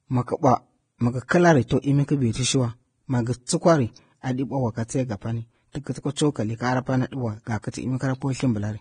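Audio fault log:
throughout: Vorbis compression. The speech sounds hissy and grainy, with roughened tones and softened consonant attacks, and nothing survives above 9.7 kHz. The likely cause is heavy lossy coding, consistent with a low bitrate of roughly 23 kbps: the encoder cuts the top band and quantises the remaining treble so coarsely that fine detail turns into noise-like fuzz. On a spectrogram there is a hard ceiling at 9.7 kHz, with blotchy, speckled texture beneath it instead of clean harmonics.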